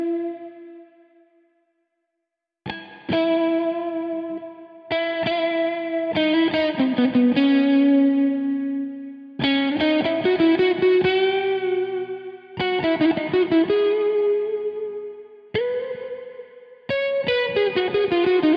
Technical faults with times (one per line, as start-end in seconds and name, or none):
none